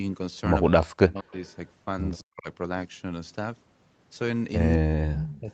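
From 0.68 to 1.34 s the speech dips hard, by as much as about 40 dB, and breaks into pieces. This is speech suppressed in double talk. Both sides were likely talking at once. The echo canceller could not tell its own talker from the loudspeaker echo, so it turned everything down.

From 1.32 to 1.68 s a faint delayed copy of the voice appears, far below the speech. This is an echo leak. One side likely played the call on a loudspeaker, and its canceller missed part of what the microphone caught. The copy trails by 207 ms.

A brief scrap of the same echo returns at 2.18 to 2.24 s, still well below the speech. It carries the same 207 ms delay.

From 2.22 to 2.48 s the speech is suppressed again. It drops sharply and chops, as both sides likely overlap once more.

From 4.75 to 5.5 s comes the longest suppression. The voice sinks by about 40 dB in places and cuts in and out. This too is likely double talk.

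Inside that stretch, from 5.1 to 5.4 s, the echo leak is loudest. It sits much closer to the speech level. The delayed copy is again 207 ms late.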